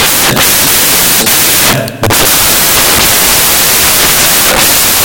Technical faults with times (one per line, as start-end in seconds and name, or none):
0.00-5.05 samples built from the wrong bytes